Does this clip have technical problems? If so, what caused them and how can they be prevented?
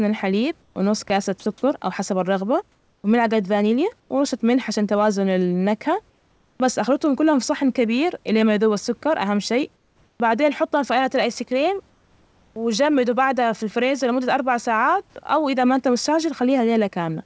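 Yes. From 0.62 to 1.46 s the speech is chopped by the voice detector, about 220 ms swapped for noise in bursts. The back-and-forth switching, rather than one clean gap, points to a likely fast-toggling detector. Prevention: add hangover time so the detector stays open through short dips.

Comfort noise replaces the background at 2.72–3.04, 4.00–4.10, 6.10–6.60, 9.76–10.20 and 11.90–12.56 s, a steady featureless hiss about 2 to 5 dB quieter. Only pauses are affected, no speech, which sets this apart from chopping. The likely cause is discontinuous transmission. Prevention: disable discontinuous transmission, or tune comfort-noise level and spectrum to match the room.

At 12.53–12.56 s the onset is clipped by the voice detector. About 30 ms of the word's soft start is lost, so it begins abruptly right where the comfort noise ends. This is likely a slow detector attack. Prevention: use look-ahead or a lower trigger threshold.

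At 15.1 s sound is dropped by the voice detector. About 40 ms of speech turns briefly into noise, likely because it was misread as background. Prevention: lower the detector's sensitivity threshold for quiet speech.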